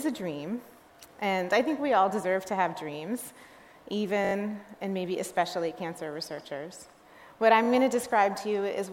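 Audio arrived late twice, so the device replayed its last buffer, a repeated buffer fault. From 4.25 to 4.33 s and from 7.64 to 7.68 s, a roughly 21 ms piece, which fits a 1024-sample buffer, loops with hard joins, giving a brief stutter.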